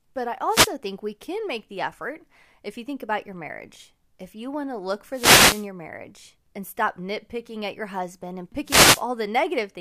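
Wireless microphone noise hits occur at 0.47 to 0.72 s, just before "think we can make"; at 5.10 to 5.68 s, between "you want to look" and "marriage and stop nitpicking"; and at 8.64 to 9.04 s, after "at your husband and". Each time the FM radio link fades as reflected signals cancel the direct one, so receiver noise surges. It is heard as a brief swish of static, the middle one longest at about 0.6 s.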